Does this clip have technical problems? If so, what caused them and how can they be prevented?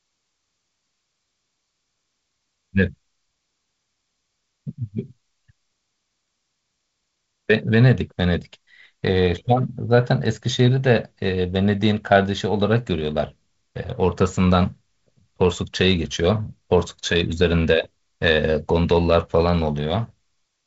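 No, this clip has no technical problems.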